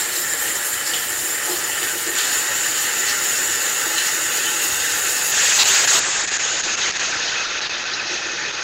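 An everyday-sound recording that turns rough and muffled from 5.33 s to the end, with the top band cut above 8 kHz, where it had reached 20 kHz. This is a call bitrate drop: the encoder was pushed to code far more coarsely, which fits a fall from 32 kbps to about 8 kbps.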